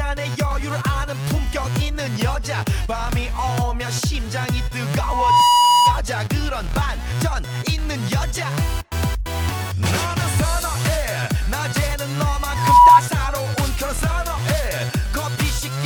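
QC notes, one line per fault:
4.99 to 6.01 s and 12.52 to 13.03 s, loudspeaker feedback squeal: a pure tone near 974 Hz swells out of the sound within a fraction of a second, about 0.4 s the first time and a little quicker the second, then sits roughly 10 dB and 15 dB above the programme before stopping. The microphone is hearing its own loudspeaker, and at that one frequency the loop gain passes unity, so the tone feeds itself until the amplifier limits it or the loop is broken.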